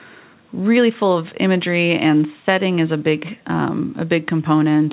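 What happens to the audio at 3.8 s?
At 3.8 s the speech carries on intact with no dropout, click or distortion, only the narrow telephone-band sound of the call path, which has nothing above 4 kHz.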